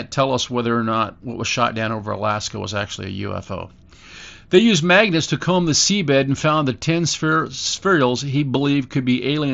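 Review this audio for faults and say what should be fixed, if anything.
Nothing in this speech needs fixing. The Bluetooth mSBC headset codec is audible as a top end that stops around 8 kHz, with a light graininess on the louder syllables.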